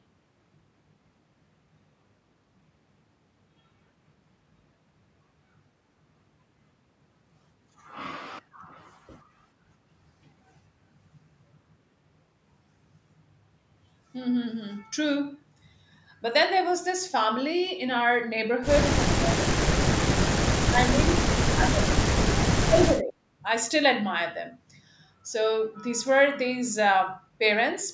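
Speech suppressed in double talk occurs at 18.97–19.91 s, 20.61–22.12 s and 22.65–23.18 s. The voice dips deeply, by up to about 35 dB. An echo canceller likely mistook it for echo.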